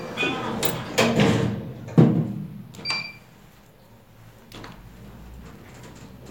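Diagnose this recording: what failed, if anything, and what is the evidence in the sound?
Processor overload crackle at the driver or buffer stage, from 5.49 to 6.09 s. A gritty, tearing crackle rides over the sound, then stops. The processor missed a run of deadlines on short buffers of a few milliseconds. Each miss replayed stale audio with hard edges.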